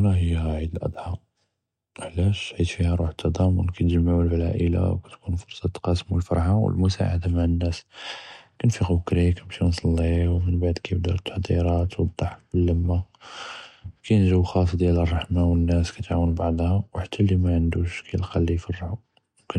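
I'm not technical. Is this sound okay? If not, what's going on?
No. From 0.14 s to 19.54 s there's a faint, steady ticking, around fourteen ticks a second, blurring into a soft rattle under the speech. Those are clock slip clicks, likely from two unsynced devices dropping or repeating single samples.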